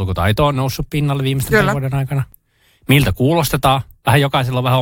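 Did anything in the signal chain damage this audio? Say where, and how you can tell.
Yes: an overlap between stream segments at 2.32 s in the speech. At a segment boundary, consistent with roughly 2-second segments, the player trimmed a few milliseconds of audio that wasn't actually duplicated, so the waveform jumps and a brief click or skip results.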